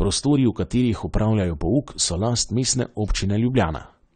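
From start to finish the speech carries AAC compression damage that is plainly audible. Nothing survives above 9 kHz, so the sound is dull and muffled, and sibilants turn smeared and fizzy with a warbling texture. The pattern points to a low bitrate, likely about 32 kbps AAC-LC, where the encoder lowers its cut-off and coarsely quantises frequency lines. On a spectrogram the energy stops flat at 9 kHz.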